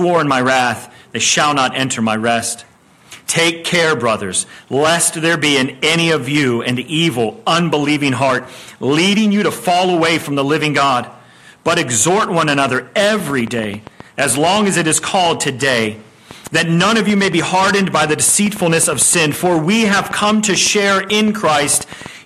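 From 12.49 s to 22.07 s a train of clicks, some seventy in all at about 7.7 per second and unevenly spaced, ticks over the sound and through its pauses, peaking a few decibels above it. Their near-identical shape sets them apart from random crackle, likely from interference.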